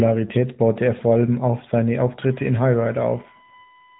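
Speech squeezed through the AMR narrowband mobile codec for the whole clip: nothing gets past about 3.8 kHz, and the synthetic buzz fits AMR-NB's 10.2 kbps mode.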